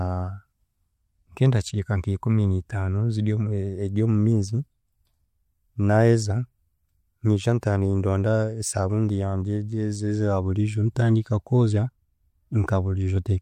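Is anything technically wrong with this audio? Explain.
Yes. Pre-echo at 7.61 s: the codec's 26 ms transform window never switched to short blocks, so quantisation noise sized for a sharp speech attack spread about 17 ms ahead of it, rising about 12 dB. It's heard as a brief hiss before a softened, smeared onset.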